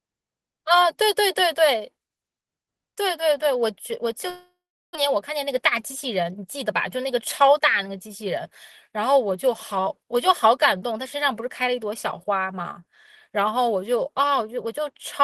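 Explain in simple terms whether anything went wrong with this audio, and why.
A likely long network dropout halted incoming audio from 4.29 to 4.97 s: the speech fades into a buzz, then silence, and 0.6 s is lost.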